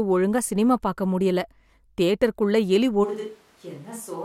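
A speech recording in which, at 3.06 s and through to the end, the sound abruptly turns roomy and hollow: the bass thins out, the level falls by about 10 dB, and background room noise rises to roughly 25 dB below the speech. The sudden change in tone points to a switch to a distant microphone, likely because the close microphone's feed dropped out and a farther pickup, such as a camera microphone, took over.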